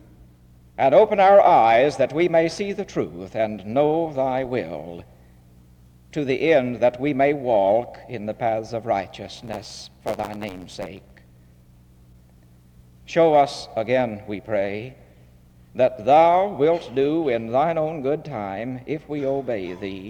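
From 9.35 to 11.20 s, a block size mismatch (truncated) cuts each block's tail, fitting 512-sample writes: a 92 Hz buzz and 1.07x speed, with timbre unchanged, unlike resampling.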